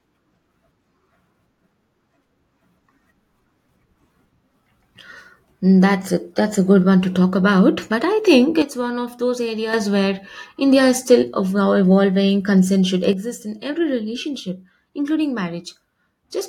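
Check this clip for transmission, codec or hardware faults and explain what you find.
Two sudden gain jumps are present. Just after "about but I think", at 8.62 s, the speech and background noise drop together by about 8 dB, recovering at 9.74 s. At 13.13 s both fall by about 7 dB and stay down to the end. The likely cause is a digital gain change applied from one sample to the next without a ramp.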